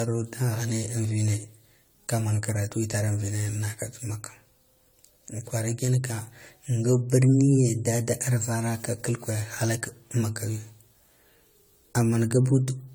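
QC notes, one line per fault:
Throughout, generation loss: the speech sounds swirly, smeared and hollow, with blurred consonant attacks and spectral holes, though content reaches 20 kHz. Likely around seven rounds of AAC-LC decoding and re-encoding, near 96 kbit/s, each quantising afresh on a shifted frame grid.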